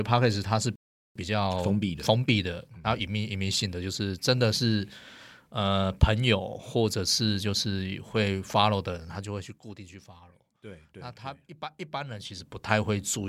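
At 0.76 s the speech cuts to silence for about 400 ms, resuming at 1.16 s where it left off. This is a playback stall, likely the player running out of buffered data or its output thread being blocked, leaving the output empty until it recovered.

From 1.16 s to 3.80 s the player works off the delay with time-compressed catch-up. Short segments are dropped and cross-faded so the speech runs about 1.15 times faster at its normal pitch. It sounds hurried.

Between 11.87 s and 12.72 s the level changes by roughly 20 dB in discrete steps of about 2 dB, around ten a second, instead of a continuous ramp. Each unsmoothed step puts a small click on the waveform, giving a zipper noise that ticks over the speech while the level moves.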